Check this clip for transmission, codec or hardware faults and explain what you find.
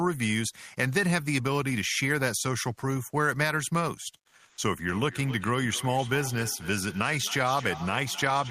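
Two faults are audible in this speech clip: a short patch of comfort noise in place of the background, and a feedback echo between two devices that runs to the end.

From 4.49 to 4.57 s, for 80 ms, the natural room background gives way to a flat, textureless hiss that sits about 9 dB away from the surrounding background level, which is itself about 49 dB below the loudest speech. The likely cause is discontinuous transmission, as in Opus DTX. The sender stops transmitting during the pause, and the receiver fills the gap with synthetic noise that only roughly matches the real background.

From 4.89 s to the end, the speech keeps returning as a thinner, ringing copy at intervals of roughly a third of a second, peaking about 14 dB below the direct speech. A second device in the same room is replaying the call, and this microphone picks that playback up and sends it back. Each device's echo canceller only removes sound from its own loudspeaker, so nothing cancels this copy, and it keeps circulating around the loop.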